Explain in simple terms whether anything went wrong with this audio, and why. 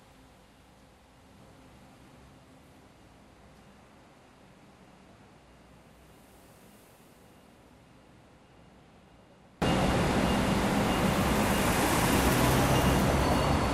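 From the start until about 9.62 s, the sound nearly vanishes and only a faint trace remains, likely because one channel is inverted. That residue, rather than true silence, is what separates this from a plain dropout, and full sound returns afterwards.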